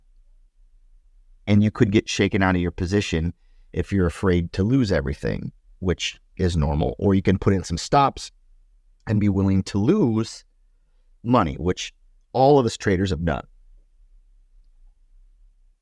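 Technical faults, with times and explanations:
No technical faults can be heard anywhere in this recording.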